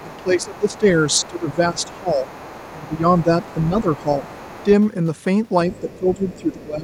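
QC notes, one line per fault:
0.0–0.79 s, 1.1–2.88 s, 3.19–4.65 s, 5.72–6.63 s: other side's voice leaking through, faint speech about 25 dB under the talker (about 20 dB at 3.19 s), likely incomplete echo cancellation.
0.03–2.26 s, 2.73–4.25 s, 5.8–6.84 s: speech suppressed in double talk. The talker dips roughly 15 dB (about 10 dB in the last span), likely gated while both sides talk.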